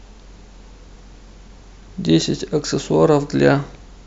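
No technical faults can be heard in this speech recording.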